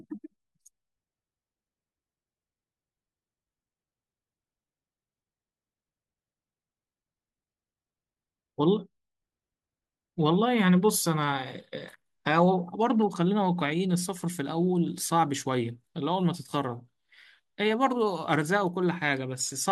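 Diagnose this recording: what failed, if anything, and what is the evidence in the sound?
Nothing failed; no fault is audible in this recording.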